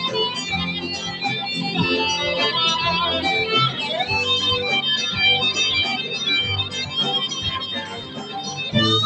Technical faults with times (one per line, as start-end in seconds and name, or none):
0.00-9.05 noise suppressor applied to music or sounds
0.68-1.23 sound cut by the noise suppressor
7.79-8.59 sound cut by the noise suppressor